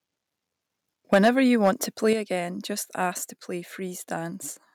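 From 1.13 to 1.29 s the speech turns harsh and crackly. The peaks run about 6 dB past the converter's limit, and roughly a tenth of the waveform is flattened. This is likely microphone overload, with the input set too high for the converter. At 1.14 s, inside that burst, voice and background drop together by 3 dB. That points to a likely microphone volume step down by the call software. Another overload crackle follows from 1.64 to 1.69 s, about 4 dB over, likely from the same cause. At 2.13 s the level steps down again, this time by 7 dB. It is likely a second automatic cut to the microphone volume.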